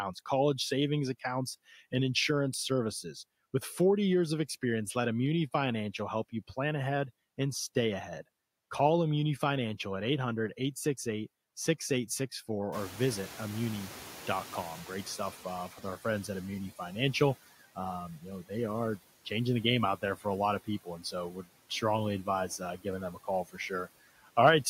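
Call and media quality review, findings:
Noise suppressor artifacts, whole clip: residual background sinks in pauses and rises under speech. Suppressor cuts noise-classified bands about 15 dB frame by frame. Spectrogram: patchy, flickering low-level noise floor between speech.

Noise suppressor catching up, 12.72 to 16.52 s: room noise jumps about 20 dB near 12.5 s and passes through with only about 11 dB of reduction, then fades over 3.8 s as the noise estimate adapts. Waveform: raised floor tapering down.

Speech cut by the noise suppressor at 18.18–18.51, 20.01–20.25, 20.64–21.82, 22.25–23.6 and 24.09–24.37 s: parts of speech swallowed, dropping up to about 15 dB for a tenth to a few tenths of a second. Suppressor misclassifies quiet speech as noise. Spectrogram: notched gaps in speech energy.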